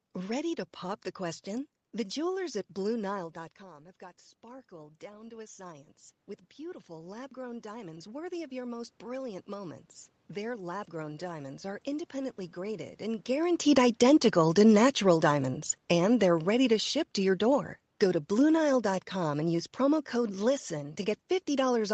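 Automatic gain rising begins at 3.17 s and continues to 14.17 s. Just after 3 s the talker drops back from the microphone and the level falls by about 16 dB. The gain control reads this as a quiet input and slowly raises its gain by about 13 dB over roughly eleven seconds. The voice and the room noise behind it swell together, so the background creeps up along with the speech rather than staying put.

Automatic gain falling starts at 13.33 s and runs to the end of the clip. Around 13 s the talker comes closer again. The gain is still set high for the quieter input, so the voice arrives loud. The control then finds the signal too hot and eases its gain back down. The speech sinks gradually, and the room noise sinks with it. Throughout, the sound stops at 8 kHz, which fits the call codec's bandwidth setting.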